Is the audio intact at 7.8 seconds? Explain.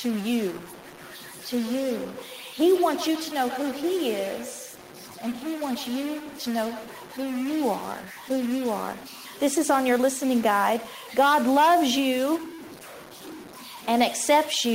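No. The speech carries a distortion, with noise filling the pauses, which likely comes from a stuck bit forcing one data bit to a fixed value. The feedback echo between two devices, running from 0.86 to 7.9 s, makes each word return roughly every 150 ms at about 14 dB below the speech. It happens because one device's loudspeaker output is picked up again by the other's microphone.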